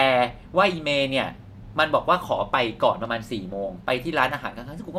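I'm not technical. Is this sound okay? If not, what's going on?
Yes, this sound is okay, and nothing is going wrong with it.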